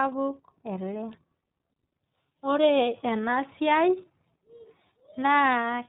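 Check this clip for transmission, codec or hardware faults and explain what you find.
There's one fault, and it runs the whole way through: the speech has gone through the iLBC codec. It's band-limited to below 4 kHz, so it sounds narrowband. Each frame's excitation is coded on its own, which leaves the speech plainly rough and slightly synthetic. The frame texture fits iLBC's 30 ms mode at around 13.3 kbps.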